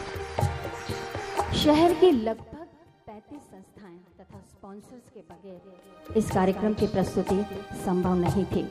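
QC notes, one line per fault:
2.04–2.46 s, zipper noise: a fast ticking zip rides on the sound as it drops by about 25 dB in unsmoothed 2 dB steps, roughly thirty per second.
5.46–6.14 s, zipper noise: a slower ticking accompanies a rise of about 25 dB, made in abrupt 2 dB steps at roughly fifteen per second, each step clicking.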